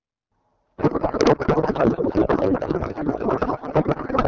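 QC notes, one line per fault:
0.77–4.28 s, codec payload misread: the clear AMR wideband sound at 12.65 kbit/s turns into garbled noise and warble that barely follows the speech. Octet-aligned AMR frames are being unpacked as bandwidth-efficient, so the decoder reads fields from the wrong places. Unlike packet loss, there are no gaps and no recovery.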